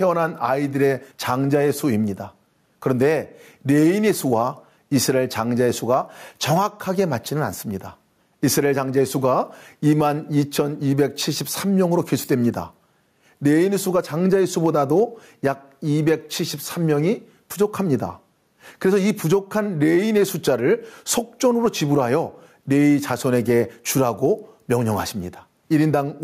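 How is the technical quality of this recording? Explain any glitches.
The recording has one fault, gain pumping, throughout. The gain swings by around 10 dB under each loud syllable, squashing the speech, likely from excessive input gain clamped by a fast limiter.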